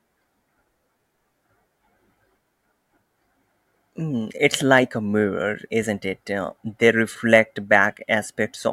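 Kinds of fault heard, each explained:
No technical faults detected in the speech recording.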